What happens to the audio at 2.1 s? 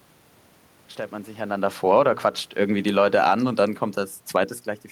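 Around 2.1 s the automatic gain control is reversing itself. Just after "stellt man sich einander", an automatic gain falling episode runs from 1.75 to 2.15 s: the control judged the input too loud and eased its gain down by about 4 dB, so the speech sinks and the room noise drops with it.

Overlapping that, from 2.08 to 2.53 s, comes automatic gain rising: the control now judges the level too low and lifts the gain back up by about 4 dB. Speech and background swell together, which undoes the dip in under half a second.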